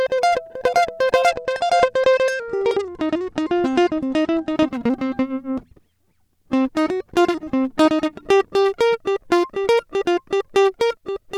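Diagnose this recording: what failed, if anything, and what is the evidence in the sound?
The Bluetooth codec stage failed with an SBC bit pool drop: from 1.27 to 4.57 s the music loses its treble and gains a gritty noise floor. This fits the link dropping to roughly 100 kbps, starving the upper sub-bands and coarsely quantising the rest until the rate recovers.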